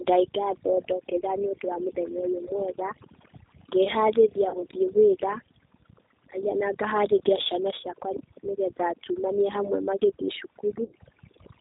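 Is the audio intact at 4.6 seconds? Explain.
No. At 4.6 seconds the audio falls inside a stretch of VoIP packet loss concealed by the speech codec, running from about 4.49 to 4.64 s. Roughly 60 ms of audio went missing in gaps spread over about 120 ms, the longest near 40 ms. The decoder filled each gap by repeating its last pitch and filter settings at falling gain, so the sound smears into a short buzzy tone or coloured noise that fades, and stays weak just after. On a waveform, the envelope sags there. On a spectrogram, the filled stretch runs on flat and dim instead of following the speech.

That moment also carries two faults present across the whole clip. G.729 coding is plainly audible, consistent with an 8 kbit/s stream. The codec rebuilds speech from a filter, a pitch predictor and a few pulses per frame, which makes it sound rough and slightly synthetic. A spectrogram shows nothing above 4 kHz, a hard ceiling that is flat across the full length. 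The waveform looks ordinary, since the damage lies in the fine detail of the spectrum.

Overdone noise removal has also been applied throughout. The noise reducer pushed any frequency band close to its noise estimate far down or off entirely, so the quieter parts of the speech were cut along with the noise. The result is near-silent pauses broken by twinkling specks. A spectrogram shows a dark, empty background scattered with isolated bright dots, and speech edges look ragged. The waveform drops to almost flat between phrases.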